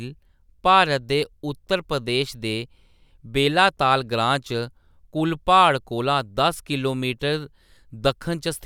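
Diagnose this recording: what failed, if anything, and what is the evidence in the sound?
Nothing in this speech recording points to a failure at any stage, so there's nothing here to diagnose.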